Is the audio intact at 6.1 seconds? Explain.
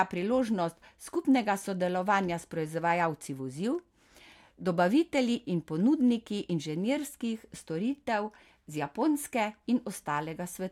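Yes, the audio is intact at 6.1 seconds, with no audible fault at that point in the speech.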